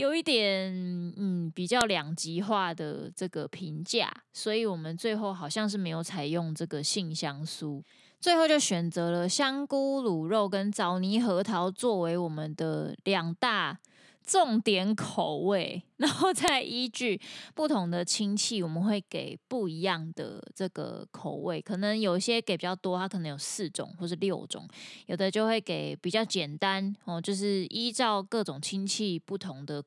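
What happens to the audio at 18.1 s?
At 18.1 s the speech carries on intact, with no dropout, glitch or other fault at that moment.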